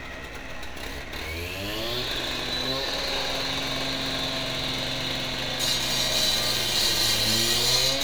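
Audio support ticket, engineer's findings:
No faults found in this sound clip on listening. No working path is listed beyond the audio itself, so there is nothing further to report.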